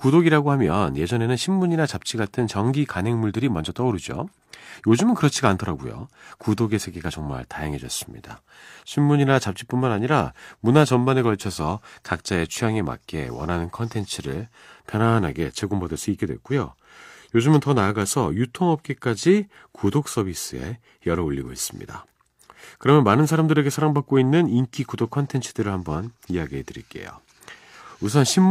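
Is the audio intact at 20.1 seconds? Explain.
Yes, at 20.1 seconds the speech plays through cleanly, with no dropout, click, distortion or other fault.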